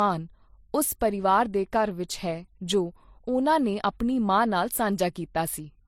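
Throughout the speech, two layers of coding artefacts overlap and nothing sits above 18.4 kHz, likely from transcoding between lossy codecs, a low-rate MP3 re-encoded as HE-AAC.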